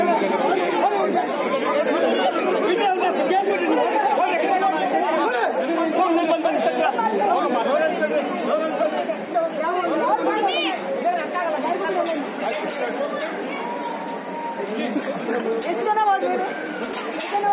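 Nothing stood out as a fault on listening.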